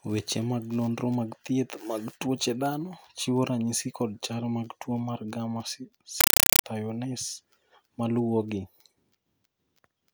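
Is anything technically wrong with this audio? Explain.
Yes. From 6.21 to 6.64 s the speech gives way to very loud, harsh chattering static, ticking at about 31 bursts per second, each around 5.33 ms long. This is a compressed stream played as audio: undecoded Dolby Digital data, consistent with a 256 kbps AC-3 stream, was treated as raw samples.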